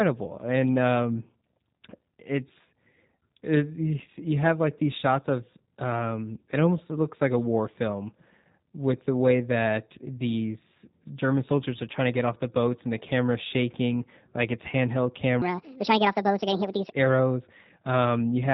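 Speech throughout, and it has the G.729 codec sound all the way through. The top end stops dead around 4 kHz, and there's a slightly rough, synthetic edge where the voice is being rebuilt from a vocal tract model, a pitch predictor and a handful of pulses per short frame rather than carried as a waveform. The damage is plainly audible and fits an 8 kbit/s low-rate VoIP path. Then, right after "shaking like it's handheld", there's a section at the wrong speed from 15.42 to 16.92 s. It runs about 1.51 times fast, so the voice turns hurried and jumps up by around seven semitones, with speed and pitch shifting together before snapping back. That's likely a player or editor fitting that stretch to the wrong clock.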